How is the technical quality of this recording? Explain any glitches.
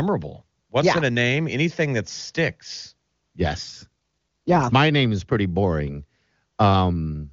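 The recording has one glitch, an AMR rate drop from 3.63 to 4.64 s on a wideband (HD Voice) call. The network forced the AMR-WB codec down to a lower rate to free bits for error protection, which fits a fall from 23.85 to 8.85 kbit/s. For about one second the speech turns rougher and more synthetic, with no gap and no loss of bandwidth, before clearing once the rate recovers.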